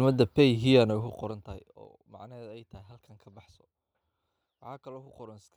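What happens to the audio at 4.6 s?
Nothing goes wrong at 4.6 s: the speech carries on intact there, with no dropout, click or distortion.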